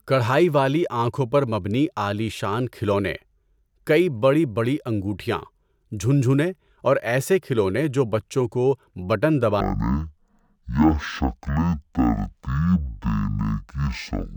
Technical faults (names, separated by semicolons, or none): stereo read as mono